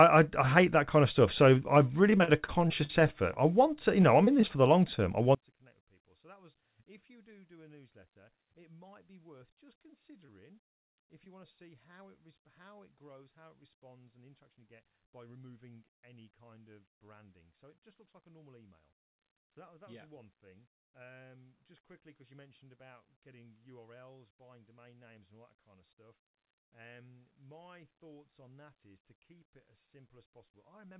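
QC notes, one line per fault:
2.10–3.04 s and 4.02–4.51 s, repeated packet loss (robotic sound): six then four gaps, longest 52 ms and 24 ms, each patched by extending the previous sound, so it turns choppy with pieces missing rather than one brief smear.
3.34–3.38 s, 10.26–10.30 s, 11.24–11.28 s, short concealed packet loss: about 20 ms goes missing each time and is filled from the preceding sound, heard as an isolated smear or wobble, not a chopped run.
5.35 s to end, one channel inverted: the mono level falls by about 33 dB, leaving a faint copy, likely because one channel's polarity is reversed so the common content cancels. It persists to the end, unlike a dropout.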